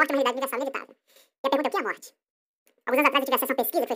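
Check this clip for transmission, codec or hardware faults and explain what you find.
One fault runs through the whole recording: the speech is affected by audio read two samples at a time (double speed). The reader treats each pair of samples as a single frame, as if the stream were stereo or used samples twice as wide, so the speech plays at twice normal speed and 12 semitones, a full octave, higher.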